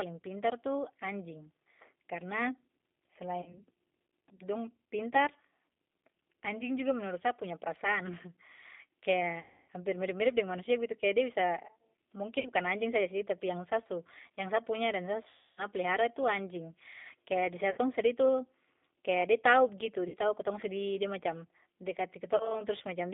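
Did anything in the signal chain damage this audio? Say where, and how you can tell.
Yes. At the codec stage, G.729 at 8 kbit/s rebuilds the speech from a filter and pulses, confining it to 250 Hz to 3.6 kHz and leaving it audibly rough and synthetic.

At the network, VoIP packet loss concealed by the speech codec, at 3.42, 9.40, 12.39, 15.29, 17.71, 20.08 and 22.36 s, stretches the preceding sound into a fading buzzy tone or coloured noise for gaps of 40 to 280 ms.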